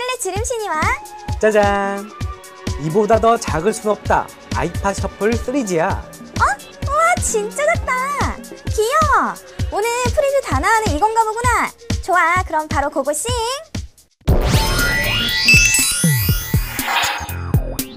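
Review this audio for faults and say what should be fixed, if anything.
Nothing here needs fixing, as there's no technical fault to point to anywhere in this recording.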